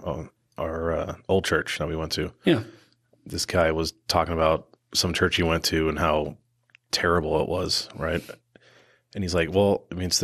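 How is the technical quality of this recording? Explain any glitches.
The recording has plainly audible coding damage throughout and one brief glitch near the end.

MP2 compression, throughout: the sound is dull and granular with a gurgling edge, likely from MPEG Layer II coding at a low rate around 80 kbps, where upper sub-bands are starved of bits and switch off while the rest are coarsely quantised.

DAB burbling, at 9.76 s: a short burst of burbling as a few corrupted bits slip past error correction, putting brief blips of noise into individual sub-bands.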